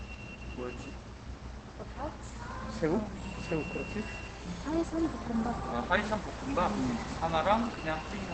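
Opus compression runs through the whole of this recording of sounds, from start to finish. Nothing is present above about 8.4 kHz, so the top end is cut away and the sounds come across muffled and hoarse, with plainly audible damage to their texture. That narrowed, rough character fits Opus likely falling back to its SILK speech mode at wideband, consistent with a low rate around 16 kbps, too few bits for non-speech material.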